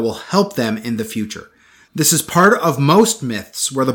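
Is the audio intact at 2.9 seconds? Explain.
No. From 2.90 to 3.01 s the speech runs into hard clipping: the signal reaches a stage about 2 dB hotter than that stage can pass, so every peak in that stretch is sliced off flat at the ceiling. Those squared-off tops add harmonics high up the spectrum that were never in the original. Because the overload is slight and lasts only about a tenth of a second, it comes through as a brief crackle on the loudest peaks.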